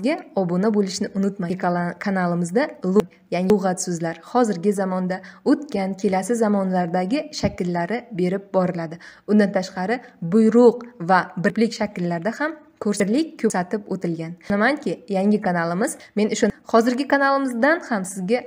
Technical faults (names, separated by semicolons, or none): chunks out of order